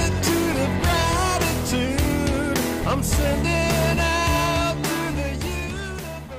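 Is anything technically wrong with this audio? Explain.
No, nothing technically wrong can be heard here.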